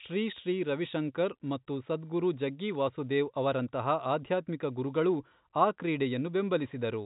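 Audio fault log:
Nothing stood out on listening to this speech, which comes through with the narrow band of an ordinary telephone line.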